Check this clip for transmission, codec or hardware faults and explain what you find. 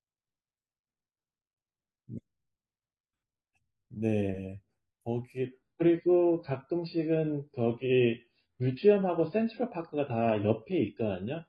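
One transmission fault is present. From 5.45 s to the end, an adaptive stream at a lower bitrate takes over. A slowed connection switched the stream abruptly, without a gap, to what sounds like about 16 kbit/s AAC. The speech turns dull and swirly, with nothing above 5 kHz.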